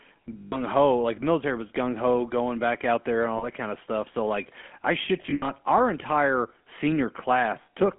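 Throughout, the speech has a buzzy, gravelly roughness and a narrow, telephone-like tone, with nothing below about 200 Hz or above 3.4 kHz. This is the GSM full-rate codec, and the damage is plainly audible. It rebuilds the voice from a vocal-tract model driven by sparse, regularly spaced pulses, which fits the 13 kbps full-rate coder. That coarse excitation is what produces the grit.

Lost GSM frames appear four times as brief rough, metallic holds where the sound rings instead of moving on. The first runs from 0.38 to 0.58 s, just before "like military was", and lasts about 140 ms. The second, from 3.38 to 3.47 s, falls between "back out there and" and "kind of stuff so". The third, from 5.22 to 5.51 s after "stuff so like i", is broken up, with its longest gap around 70 ms. The last is at 7.62 to 7.68 s. Each time the decoder repeated the last good frame's settings, and the short gaps never fade fully to silence.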